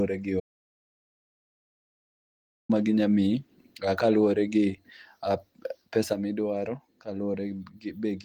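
Speech, with two faults. An audio dropout to silence runs from 0.40 to 2.69 s. About 2.3 s goes to silence, with no room tone, likely from lost input. The speech resumes at "ma ginyalo". A sudden gain jump at 6.13 s drops speech and background together by about 6 dB, and they stay quieter to the end. A gain step applied without a ramp is the likely cause. Light Opus voice coding can be heard across the clip.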